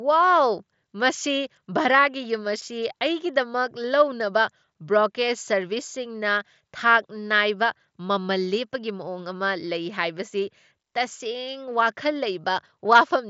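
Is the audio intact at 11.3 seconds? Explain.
Yes, the audio is intact at 11.3 seconds, with no fault at that moment.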